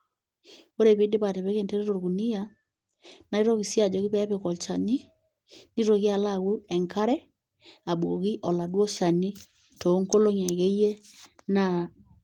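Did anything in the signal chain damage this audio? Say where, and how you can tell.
No, nothing in the chain damaged it.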